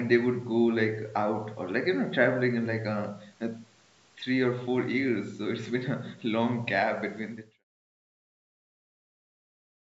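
Nothing faulty here: the speech bears ordinary call-microphone processing with no content above 8 kHz, and the level eases down in a smooth fade-out from around 7 s to 7.64 s.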